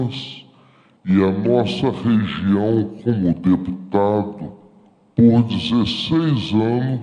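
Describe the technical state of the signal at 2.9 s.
Wrong sample rate at 2.9 s, as throughout: the audio runs at 0.667 speed and about 7 semitones low, which fits 48 kHz material played back at 32 kHz.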